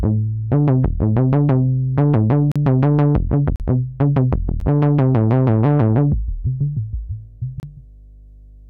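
A ground loop or a nearby transformer is coupling the 50 Hz power line into the signal, so a steady low hum sits under the sound for the whole clip, roughly 25 dB below it. This is mains hum, heard as a constant low tone beneath everything else.

Where the time stamps of consecutive stream segments fail to meet, the player fills the difference with silence. This gap between stream segments produces hard-edged holes at 2.52 to 2.56 s (40 ms), 3.56 to 3.60 s (40 ms), 4.60 s (about 12 ms) and 7.60 to 7.63 s (30 ms). They fall on a one-second segment grid, and no audio is lost.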